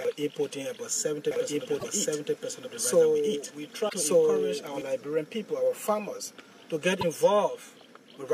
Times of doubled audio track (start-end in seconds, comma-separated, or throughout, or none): 1.31-4.81